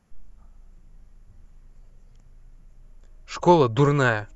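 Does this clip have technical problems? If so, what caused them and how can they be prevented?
No, nothing stood out as a technical problem on listening to this speech recording.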